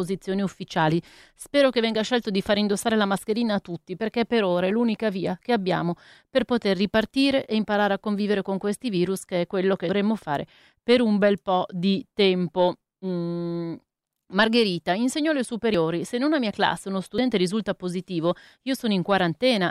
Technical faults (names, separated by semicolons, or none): dropped buffer (overrun)